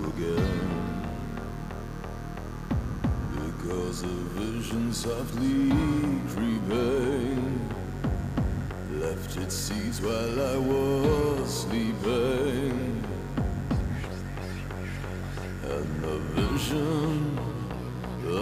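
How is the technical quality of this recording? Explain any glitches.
The recording has one problem that runs the whole way through: mains buzz. A dimmer, rectifier or unshielded lead is letting sharp spikes in twice per 50 Hz cycle, stacking harmonics up into the kilohertz range. It sits roughly 25 dB under the sound as a steady, raspy buzz.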